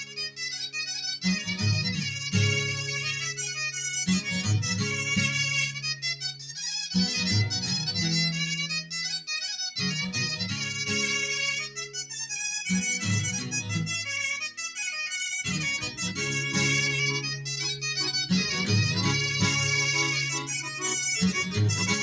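Noise suppressor applied to music or sounds, across the whole clip: a suppressor built for speech stays active. It treats sustained tones, ambience and reverberant tails as noise, so those parts sink while sharp onsets pass largely intact. The gain it removes keeps swinging by roughly 5 dB, which makes the level pump and flutter and leaves held material thinner than the attacks that start it.

Sound cut by the noise suppressor, from 0.0 to 0.39 s, 5.72 to 6.03 s and 6.32 to 6.56 s: in each of these stretches the suppressor misjudges the sound as noise and pulls it down harder than its surroundings, by about 10 dB in the first two and about 9 dB in the third. The affected portions last a few hundred milliseconds each. Steady or decaying sound dips audibly or has its fade chopped short.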